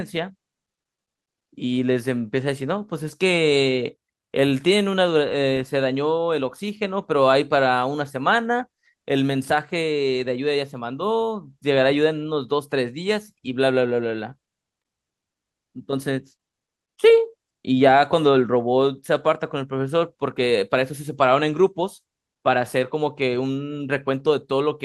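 No technical faults can be heard anywhere in the speech recording, and the signal stays steady and intact throughout.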